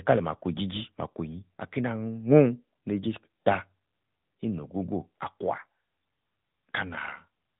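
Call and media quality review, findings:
AMR narrowband mobile codec, throughout the speech. Hard band limit, nothing above 3.8 kHz; sibilants dull, no air. Component: 8 kHz mobile speech path. Plainly audible buzzy, synthetic texture from the vocal-tract model rebuilding speech from sparse pulses per 5 ms. Damage level fits an AMR-NB mode near 10.2 kbps.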